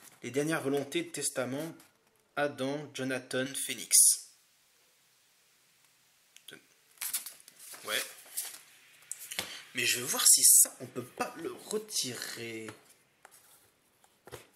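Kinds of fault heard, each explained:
Pre-emphasis left on: from about 3.46 s to 10.64 s the top end jumps up because a treble lift, which matches a J.17-style curve, went in upstream and the matching de-emphasis never got applied on the way back out. You end up with roughly 11 dB more at 10 kHz than at 1 kHz, so that stretch turns thin, glassy and spitty, with sibilance pushed forward, then settles back once the section ends.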